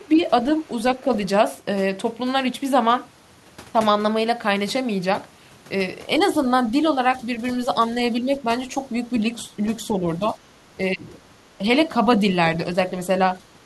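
It's a speech recording with two echo-canceller problems tangled together. First, there's speech suppressed in double talk: the talker's level ducks at 0.12–0.21, 1.01–1.09, 8.24–8.46, 9.99–10.38 and 10.95–11.15 s, mostly by about 5 dB, though the 10.95 s dip goes to about 10 dB. Each lasts roughly 70 ms to a fifth of a second. That's likely the canceller hearing both ends at once, failing to tell the local voice from loudspeaker echo, and pulling the whole signal down. Second, the other side's voice is leaking through: a very faint trace, about 40 dB under the speech, shows up at 0.62–0.71 s and again from 13.49 s to the end. That's likely residual far-end audio from the loudspeaker that the canceller didn't fully remove from the microphone.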